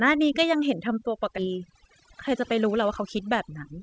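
From start to finish the pauses fall to near silence scattered with faint twinkling specks. That is overdone noise removal: a noise reducer set too aggressively pushed individual frequency bands down or out whenever they came close to its noise estimate, taking the quieter parts of the voice along with the background. Because the audio came through a G.722 call path, which carries nothing above 8 kHz, the top end is already band-limited.

At 1.38 to 1.40 s the speech lurches forward with no gap and no fill. Roughly 0.4 s of material is simply gone, and the audio on either side of the cut is butted together almost directly. This is a skip ahead: a stretch of audio was dropped, most plausibly by a jitter buffer that had overflowed while later audio was already queued. Playback resumed from the newer audio, cutting the delay by about the same amount.

From 2.00 to 3.01 s the speech runs slightly fast, about 104% of normal speed, with the pitch unchanged. 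That is jitter buffer speed-up: holding more audio than its target, the receiver repeatedly cut out short pieces one or a few pitch periods long, removing around 40 ms in all to bring the delay back down.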